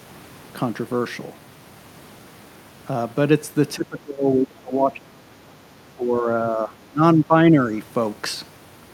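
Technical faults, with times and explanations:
3.75–5.27 s, 5.95–6.27 s, 6.43–6.73 s, 6.89–7.34 s and 7.51–7.73 s: speech suppressed in double talk. The voice ducks in uneven chunks, up to about 30 dB first and then shallower, rather than dropping out cleanly. This is likely an echo canceller muting the talker while the far side speaks.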